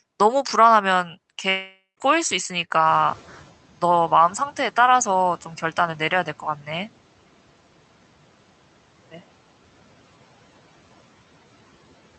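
At 1.49 s the sound breaks up. From there to 1.99 s, the last sound is stretched into a buzzy tail that fades. A short silence of about 0.12 s follows. The audio then resumes, but roughly half a second of it never plays. This is a long network dropout. The likely cause is packets that stopped arriving. The receiver filled the gap with made-up sound and then gave up.

At 2.85 s the background noise jumps. It rises by about 21 dB at around 3 s. At first it comes through with less reduction. Over the next 0.69 s it sinks by about 10 dB, ending near 3.54 s. This is the noise suppressor catching up. Its estimate of the background lagged behind the sudden rise, so reduction only took hold gradually. The room noise itself belongs to the recording.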